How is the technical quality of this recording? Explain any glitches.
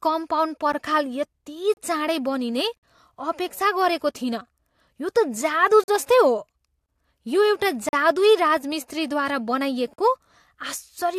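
The recording is broken up by brief silent holes in the speech. These are gaps between stream segments, at 0.72 s, 1.74–1.77 s, 2.77–2.83 s, 5.84–5.88 s, 6.86–6.89 s, 7.89–7.93 s (just before "जादुई राजमिस्त्रीद्वारा") and 9.94–9.98 s (just after it). They recur at roughly one-second intervals, which fits 1-second segments. The timestamps of neighbouring segments fail to meet, and the player pads each mismatch with silence. The result is a hard-edged dropout of 10 to 56 ms, while the surrounding speech remains intact.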